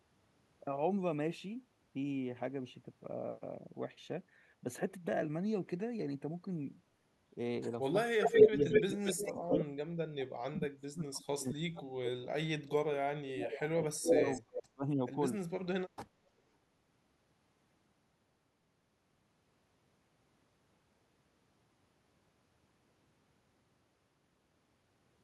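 It's a speech recording, and between 8.1 and 15.16 s it gets messy. The voice dips hard in speech suppressed in double talk: at 8.1–9.68 s by around 20 dB, at 10.14–13.76 s by as much as 35 dB, and at 13.94–15.16 s by around 30 dB. That's likely an echo canceller ducking everything while both ends talked at once. Layered on that is echo leak, a delayed copy of the voice, likely from a far-end loudspeaker the canceller didn't fully clean. It sits 216 ms behind at 8.23–9.33 s (roughly 10 dB louder than the speech) and at 9.5–9.63 s (about level). Later it sits 298 ms behind: a faint blip at 13.72 s, about 25 dB down, then 14.08–14.63 s at roughly 5 dB above the speech.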